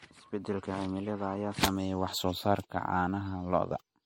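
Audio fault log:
throughout generation loss: the speech sounds swirly, hollow and smeared, with blurred attacks, likely from around five rounds of MP3 decoding and re-encoding at a rate fitting 64 kbit/s. On a spectrogram, holes accumulate, onsets smear, and nothing appears above 16.5 kHz.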